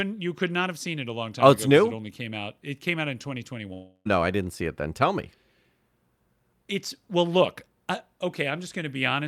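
A speech clip with one long network dropout from 3.73 s to 4.07 s, between "came out in" and "I didn't see it". For about 0.32 s the signal is replaced by a fading continuation of the last sound, a decaying buzz or hiss, followed by roughly 10 ms of near silence before the audio resumes. The sound that should occupy that gap never returns. The likely cause is a stretch of lost packets that the receiver concealed by extrapolating until its concealment gave out.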